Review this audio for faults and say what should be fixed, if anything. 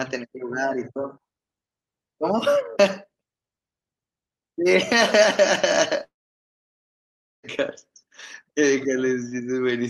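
A long network dropout, likely from the link stalling, stopped audio arriving from 6.03 to 7.45 s. The receiver stretched the last sound into a brief fading buzz, then left 1.33 s of silence, and 1.4 s of speech is lost for good. A deeper jitter buffer with retransmission or forward error correction would help the stream ride out a gap like this.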